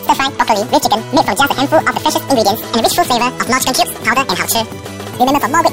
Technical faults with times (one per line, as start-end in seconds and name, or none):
0.00-5.73 audio read two samples at a time (double speed)